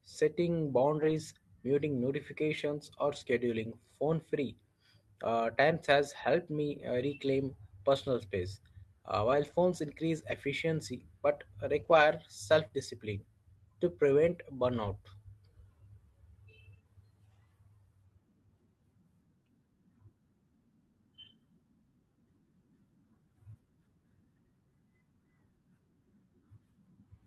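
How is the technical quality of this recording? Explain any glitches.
Packet loss degrades the speech at seven points. Most losses were recovered without gaps, and one was concealed.

Lost packet rebuilt from error correction occurs at 1.01–1.11 s, 4.07–4.13 s (after "muting notifications or scheduling"), 9.27–9.53 s, 10.27–10.33 s, 11.79–12.01 s and 14.85–14.87 s (after "discipline to prevent"). In each case a low-bitrate redundant copy carried in the following packet filled the gap. About 20 to 140 ms of audio at each point sounds rougher and noisier, but there is no dropout.

Short concealed packet loss occurs at 12.67–12.71 s, just before "discipline to prevent". About 20 ms never arrived, and no backup copy existed. The decoder extrapolated from the preceding sound and crossfaded back into the real audio, leaving a brief smear or wobble where a short sound may vanish.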